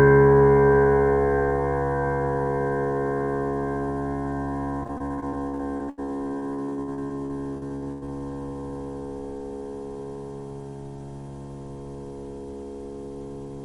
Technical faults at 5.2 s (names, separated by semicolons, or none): repeated packet loss (robotic sound)